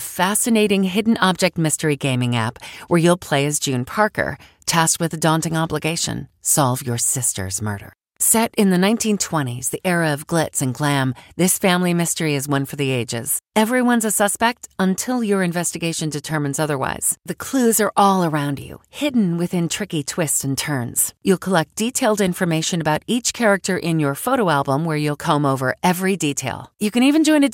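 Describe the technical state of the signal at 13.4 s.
A brief watery blip cuts across the speech from 13.36 to 13.39 s, about 24 ms of garbled texture. This is DAB burbling. Weak reception let bit errors, here at a low rate of roughly a tenth of a percent, slip past the error correction into the MP2 audio data. Corrupted samples put short blips of noise into individual sub-bands, and the short span points to a handful of damaged audio frames.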